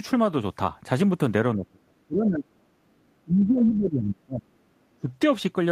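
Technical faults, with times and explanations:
1.55–2.72 s, speech suppressed in double talk: the speech dips by as much as about 35 dB for roughly a second, likely an echo canceller attenuating its own talker during overlap.
3.18–4.45 s, speech suppressed in double talk: the speech drops away by up to about 30 dB, likely the canceller mistaking overlapping talk for loudspeaker echo.
4.97–5.09 s, speech suppressed in double talk: a brief dip of about 20 dB lasting around a tenth of a second, likely the same echo suppression briefly turning the talker down.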